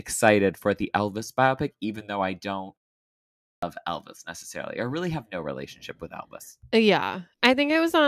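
At 3.4 s the speech bursts abruptly out of silence with its first 0.23 s missing: a clipped start after a pause, as the output device, idle through the 0.7 s gap, wakes too late.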